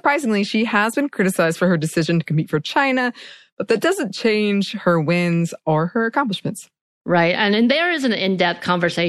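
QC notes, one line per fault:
Throughout, MP3 compression: the speech sounds watery and swirly, with a dull top end where the treble stops abruptly, metallic chirping around s sounds, and softened, smeared consonant attacks. This is likely lossy MP3 encoding short on bits, which fits a bitrate around 64 kbps. The encoder cuts high frequencies at a fixed point and drops quiet spectral detail, which flickers in and out from frame to frame and produces the plainly audible swirl.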